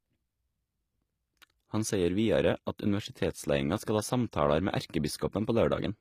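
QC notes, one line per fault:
Throughout, HE-AAC compression: the speech treble sounds rebuilt rather than captured, with s sounds gritty and metallic, since upper bands are copied up from lower ones and only coarsely shaped, leaving harmonics misaligned. The damage fits about 24 kbps, likely HE-AAC v2.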